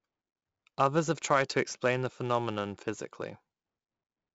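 Speech with heavy 4-bit ADPCM compression throughout: gritty hiss rising and falling with loudness, unlike steady background noise, and nothing above 7.7 kHz, suggesting 64 kbps.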